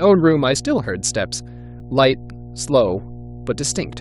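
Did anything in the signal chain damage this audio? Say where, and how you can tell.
Yes. A steady low tone sits under the speech for the whole clip, pitched at 60 Hz and roughly 20 dB below the speech level, with no change as the talker starts and stops. That is mains hum, picked up in the analogue wiring before conversion, most plausibly a ground loop or a nearby transformer letting the 60 Hz supply couple into the signal path. Because it is constant rather than signal-dependent, it points to the wiring and not to any digital stage.

The speech also jumps forward twice, at 0.55 s and from 1.80 to 1.82 s. Each time, around 50 ms of audio is missing. That is the signature of compressed frames skipped at the codec or storage stage. Whole frames were absent or rejected as corrupt by the decoder, so playback leapt ahead.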